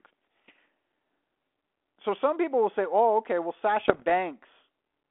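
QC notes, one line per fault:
3.80–4.11 s, bit errors on an ADPCM link: just after "okay well", a roughly 0.3 s stretch of pops and gritty bursts with jumpy level, as flipped bits throw off the decoder's step size and predictor, which fits a rather low error rate, well under one percent. On a waveform, spiky transients and uneven amplitude; on a spectrogram, broadband vertical streaks within a band ending near 3.5 kHz.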